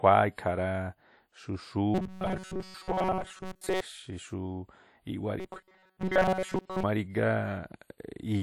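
WMA compression runs through the whole speech clip. The smeared, ringing quality and hiss that swells with the voice likely come from a basic transform encoder with long blocks, and the plainly audible damage fits a low rate such as 48 kbps.

Robotic sound from repeated short buffers appears from 1.94 to 3.81 s and again from 5.40 to 6.84 s. The voice becomes a rigid metallic buzz at 188 Hz, likely because a segment of about 5.3 ms was looped in place of most of the real audio.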